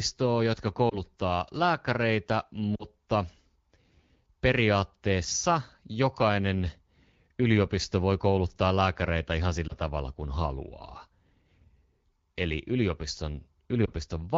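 Speech over an AMR-WB link, around 12.65 kbit/s going by the sound. It has four brief dropouts from lost AMR speech frames, at 0.90, 2.75 (two frames, so a bit longer), 9.68 (between "voi kouluttaa lääkäreitä ihan" and "tavalla kuin haluaa") and 13.85 s. The single-frame ones are each a brief dip or warble and the two-frame one drops to near silence, where the decoder patched over the missing frames.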